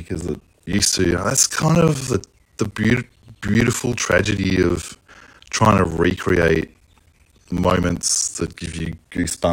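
From 0.08 s to 9.44 s the speech carries a steady train of ticks every 64 ms, heard only where there is signal. These are periodic USB or driver dropouts: something stalls the audio path at a fixed interval, punching gaps of roughly 10 ms of silence into the stream.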